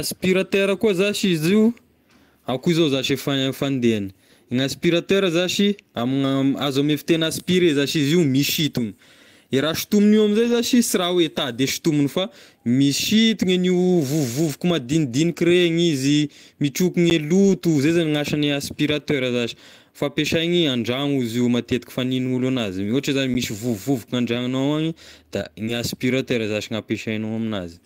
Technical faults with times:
10.43-10.53 lost packet rebuilt from error correction
14.47 lost packet rebuilt from error correction
17.10 block of digital silence
17.40-17.54 lost packet rebuilt from error correction
19.42 lost packet rebuilt from error correction
23.34 block of digital silence
25.65-25.69 short concealed packet loss
25.67 lost packet rebuilt from error correction

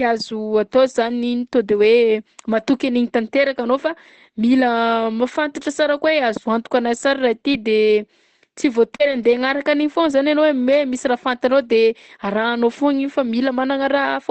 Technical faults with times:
7.51-7.55 short concealed packet loss
7.53-7.55 lost packet rebuilt from error correction
8.95-9.01 short concealed packet loss
8.99-9.33 lost packet rebuilt from error correction

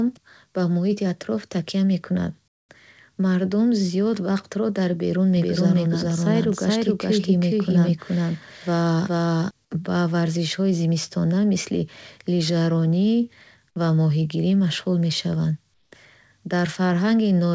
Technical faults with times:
2.48-2.69 comfort noise in place of the background
5.37-9.51 doubled audio track
15.74-15.92 comfort noise in place of the background

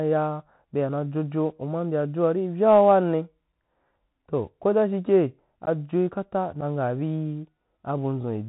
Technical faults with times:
0.00-8.48 Bluetooth CVSD headset codec
5.66-5.68 unconcealed Bluetooth headset packet loss
6.61-6.63 unconcealed Bluetooth headset packet loss

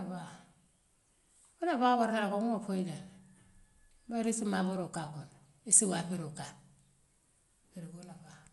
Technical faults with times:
0.00-8.52 Dolby Digital compression

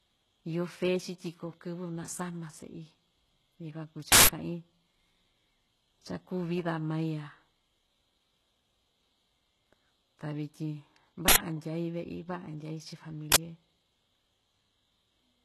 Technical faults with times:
0.00-15.45 HE-AAC compression
4.12-4.28 uninitialised buffer
11.28-11.36 uninitialised buffer
13.32-13.36 uninitialised buffer

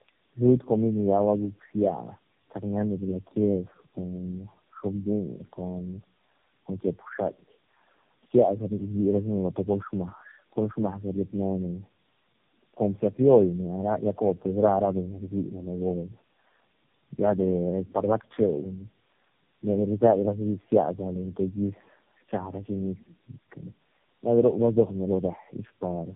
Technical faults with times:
0.00-26.15 tandem speech coding

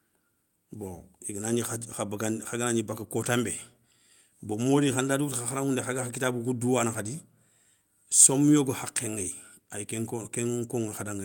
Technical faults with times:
none

